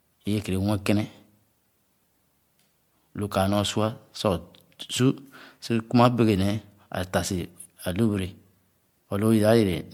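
Speech, with generation loss throughout. The sound is swirly, smeared and hollow, and consonant attacks blur. It likely comes from around four passes through an MP3 codec at a setting that fits 96 kbit/s. Each pass added fresh quantisation noise and spectral holes.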